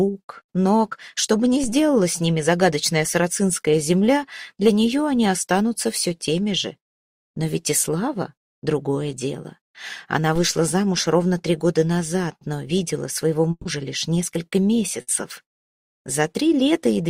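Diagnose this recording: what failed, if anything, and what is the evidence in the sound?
A low thump at 1.64 s and another at 10.36 s bracket a DC step: the waveform's zero line jumps and then returns, while the sound carries on unchanged. This points to the converter or analogue input, such as an offset introduced by recalibration or an input being switched in.

At 13.51 s the sound freezes into a held, fading continuation of the last sound for about 140 ms, drops briefly to silence, then resumes further on. At 15.01 s a shorter 60 ms version follows. Each is a burst of packet loss on the network, with the receiver extending the last sound to cover the missing stretch.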